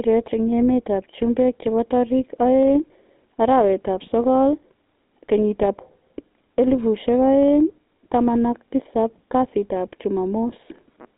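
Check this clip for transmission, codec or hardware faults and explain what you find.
The speech passes through the GSM full-rate codec for its whole length. Nothing reaches above about 3.8 kHz, and the band sits roughly between 200 Hz and 3.7 kHz, which fits a 13 kbps GSM stream. The codec rebuilds the voice from a vocal-tract model driven by a sparse, regularly spaced pulse excitation. That coarse excitation gives the voice its plainly audible buzzy, gravelly grain. Simple telephone band-limiting would sound muffled and clean, not rough like this.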